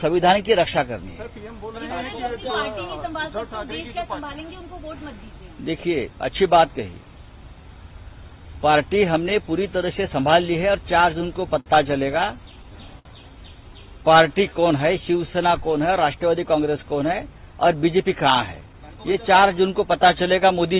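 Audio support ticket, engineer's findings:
Repeated stalls (stutter), 10.62–11.68 s. Jitter buffer ran empty six times as packets arrived late, and the receiver held the last sound through each gap: about 99 ms filled in total, longest 55 ms, nothing lost. Audible drag and stutter.

Short stall from a late packet, 12.99–13.07 s. One packet missed its playout slot, jitter buffer underran, and the receiver stretched the preceding sound for 60 ms before resuming at the same point. Symptom: one sound held too long, slight buzz or dip.

Jitter buffer slow-down, 14.14–15.48 s. Buffer rebuilding its reserve by repeating pitch periods and pause fragments, adding 84 ms. Playback at 94% speed, pitch unchanged. Sounds drawn out, possibly a faint warble.

Jitter buffer speed-up, 17.40–19.43 s. Buffer over target, so the receiver trimmed short pitch-period segments, roughly 150 ms in all. Playback at 107% speed, pitch unchanged, sounding hurried. 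Band ends at 4 kHz throughout, which fits G.711 mu-law at 64 kbps.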